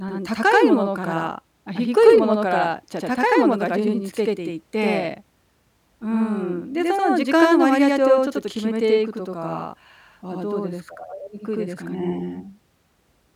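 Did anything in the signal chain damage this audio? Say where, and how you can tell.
Yes, at the driver or buffer stage. Throughout the speech, each syllable repeats 85.33 ms later at equal level. That is channel delay (doubling). One channel runs late, which fits a 4096-sample buffer. Summing to mono turns that offset into a slap echo.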